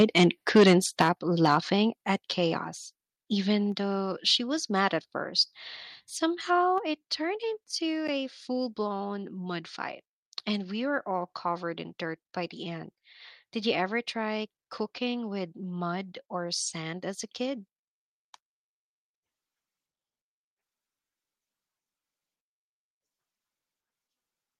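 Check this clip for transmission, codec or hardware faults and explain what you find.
Two hardware-related faults are audible in the first few seconds of this speech clip.

Microphone overload occurs at 0.55 to 0.74 s, about 8 dB over, with roughly a fifth of samples flattened, and again at 1.0 to 1.09 s, about 12 dB over. The likely cause is input gain driving peaks past the converter's ceiling. The result is a harsh crackle that tracks the loudest moments rather than a steady codec grit.

The microphone volume is stepped down at 1.02 s by 6 dB and at 2.04 s by 4 dB, just before "at chaos". This is likely the software cutting input gain. Voice and background drop together in one instant step, unlike a gradual compressor fade.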